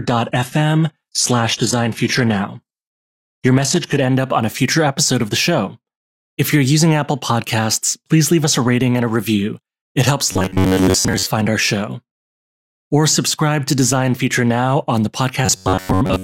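Speech clip: the first 4.0 s, up to "end up on a", show an adaptive stream starting at a low bitrate, with dull, artefact-heavy sound and nothing above 12.3 kHz, consistent with an HE-AAC rendition near 16 kbit/s, before it jumps without a gap to something like 96 kbit/s AAC-LC. Robotic sound from repeated short buffers appears at 10.32–11.30 s, before "our show", and at 15.46–16.24 s, after "on the", as a metallic 93.8 Hz buzz, likely from roughly 10.7 ms buffers being repeated while most of the real audio is skipped.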